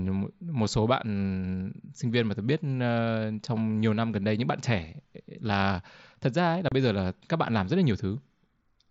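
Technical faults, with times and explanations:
6.69 to 6.72 s, unconcealed Bluetooth headset packet loss: the speech drops out for about 30 ms, replaced by silence or an idle pattern, with hard edges at both ends. Over the headset link, a short run of voice packets never arrived and nothing filled the gap, so the waveform simply stops and restarts. The length points to roughly four consecutive lost frames. Around it, the wideband mSBC path carries speech up to 8 kHz with light grainy noise.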